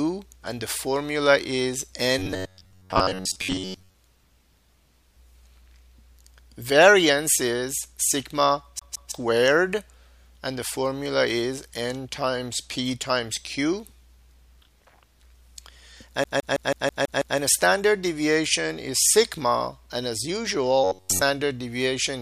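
From 2.19 to 3.96 s the sound turns into a rigid, metallic buzz pitched near 94 Hz, the robotic sound from repeated short buffers. The likely cause is that new audio arrived too slowly, so the playback software kept repeating the last buffer of about 11 ms, which fits that 94 Hz tone, and skipped most of the real material underneath. The sound still roughly follows its original contour.

At 8.79 to 9.12 s a CD stuck on one turn fault appears. The same 0.16 s segment plays twice in a row, with a brief mute at each jump back. This is the fast, even stutter of a laser being thrown back at the same spot on each revolution.

The same skip returns from 16.24 to 17.38 s with the identical 0.16 s loop, this time repeating seven times before playback moves on.

From 20.84 to 21.22 s the 94 Hz robotic buzz returns, most likely from the same repeated short buffer of about 11 ms standing in for late audio.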